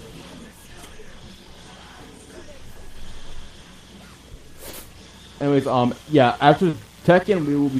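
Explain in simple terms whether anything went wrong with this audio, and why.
Short concealed packet loss happened four times: small chunks of audio arrived too late to play, so the receiver covered each gap by stretching the last bit of sound. You hear brief smears or wobbles at 1.43, 3.63, 4.69 and 6.69 seconds, each lasting 20 to 40 milliseconds.

Mains buzz starts at 5.87 seconds and continues to the end. Electrical interference from the 60 Hz power supply leaked into the signal, adding a quiet but steady, raspy hum beneath the sound for the last couple of seconds.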